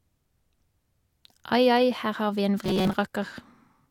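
From 2.65 to 2.95 s, robotic sound from repeated short buffers: a rigid 188 Hz buzz, likely from a 5.3 ms buffer replayed while most new audio is skipped.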